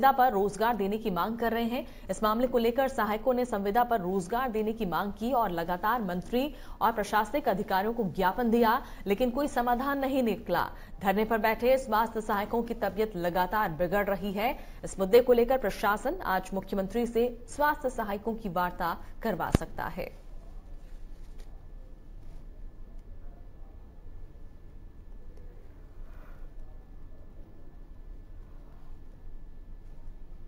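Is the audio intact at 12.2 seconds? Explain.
No. At 12.2 seconds, as through the whole clip, there is imaging from sample-and-hold upsampling. Each sample was simply repeated to raise the rate, with no smoothing filter, which fits a jump from 16 kHz to 48 kHz. Mirrored copies of the spectrum sit above the original band. The lowest spans 8 kHz to 16 kHz at about 22 dB below the signal. It sounds like a bright metallic fizz that rises and falls with the sound.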